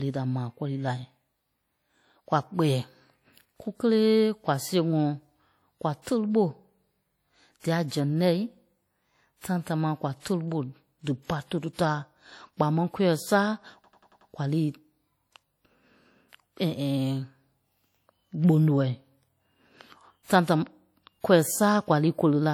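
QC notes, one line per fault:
Throughout, WMA compression: the speech has a plainly audible ringing, washy quality, with a hiss that swells and fades along with the signal. This is likely a transform codec working with long blocks, which smears quantisation noise over tens of milliseconds and zeroes weak components, consistent with a low bitrate around 48 kbps. On a spectrogram, faint detail between harmonics looks patchy and blotchy, with smeared pre-echo before onsets. Content still reaches about 20.1 kHz.
13.84 to 14.30 s, system hang loop: one 92.88 ms slice of audio repeats exactly five times, producing a machine-gun stutter at about 10.8 Hz rather than a buzz. This happens when the system freezes while the sound hardware keeps replaying the same ring buffer, and the length fits a 4096-sample buffer. The waveform shows identical blocks repeated back to back. The spectrogram shows vertical stripes at a regular spacing. 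Essentially no audio is skipped.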